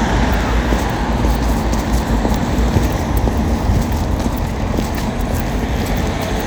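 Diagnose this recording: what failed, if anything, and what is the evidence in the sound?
GSM phone buzz enters at the analogue wiring stage, from 6.03 s to 6.42 s: a hard, raspy buzz about 14 dB below the sound, holding steady as a nearby phone in an active call pulses its transmitter about 217 times a second. Some unshielded input or cable rectifies those radio bursts into audio. A spectrogram shows a comb of evenly spaced harmonics stacked on 217 Hz, and the waveform shows a regular train of sharp pulses riding on the signal.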